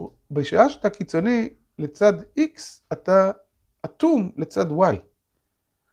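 No technical faults can be heard anywhere in this speech recording; the signal stays continuous and steady throughout.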